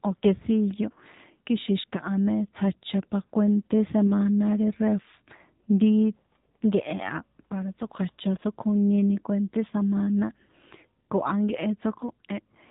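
From start to finish the speech carries the sound of the AMR narrowband mobile codec, at a setting that fits a 7.4 kbps mode. The audio has been reduced to 8 kHz sampling, so nothing above 4 kHz survives, and the voice is rebuilt from a vocal-tract model excited by a handful of pulses per 5 ms subframe. At this low rate the damage is plainly audible: a muffled, band-limited telephone quality with a buzzy, synthetic edge throughout.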